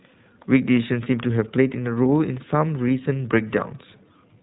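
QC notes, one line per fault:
Throughout, iLBC codec. Nothing above about 3.9 kHz survives, so the speech sounds narrowband and muffled. The excitation is coded frame by frame, which fits 20 ms frames at about 15.2 kbps. That leaves a plainly audible rough, synthetic edge on the speech.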